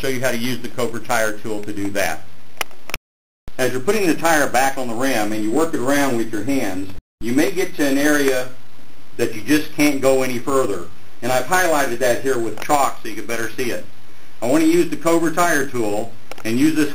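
At 6.98 s a playback stall cuts the sound to silence for about 224 ms, likely because the player ran short of data or its thread blocked, before output resumes at 7.21 s.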